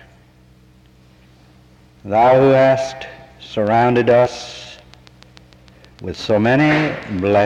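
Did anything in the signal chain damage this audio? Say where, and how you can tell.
Yes. A train of clicks runs from 3.67 to 7.34 s: about 30 near-identical pulses at a regular 6.7 per second, each peaking at roughly the level of the programme itself. They tick through the sound and any gaps alike, so they sit on top of the signal rather than coming from it. This is likely the analogue wiring or interface stage, with nearby equipment interference or a struggling interface injecting a repeating pulse.

Compressed frames are skipped at 4.25 s and 6.88 s, a codec or storage fault. At each point the audio lurches forward instead of continuing, with a short smeared blip at the join rather than a sharp click, because decoded frames overlap and blend across the gap. The jumps are about 50 ms and about 20 ms. With a 23.2 ms frame length, that points to roughly two missing or rejected frames and then one.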